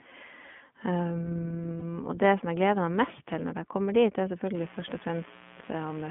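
The whole speech clip passes through the iLBC codec, which fits its 15.2 kbps mode: the band sits between 150 Hz and 3.4 kHz, and the voice sounds slightly rough and synthetic. From 1.80 to 1.83 s, lost iLBC frames (consistent with one missing 20 ms frame) are concealed by repeating the last pitch cycle, leaving a brief buzzy held vowel before the voice recovers. From 4.55 s to the end, mains buzz leaks in as 60 Hz switching spikes and their harmonics, adding a steady raspy buzz about 20 dB below the speech.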